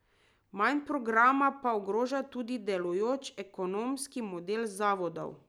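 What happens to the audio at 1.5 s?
At 1.5 s the speech sits inside a run of periodic USB or driver dropouts from 0.06 s to 5.19 s. Every 1.02 s, a stalled bus or driver skips a tiny sliver of audio, giving a tick. Unlike random clicks, these ticks keep strict spacing.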